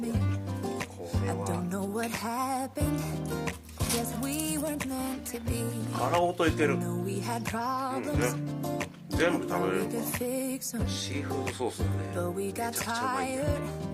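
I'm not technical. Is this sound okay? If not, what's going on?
Yes, this sound is okay. There's nothing wrong here that you need to worry about.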